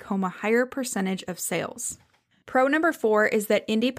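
No technical faults can be heard anywhere in the recording.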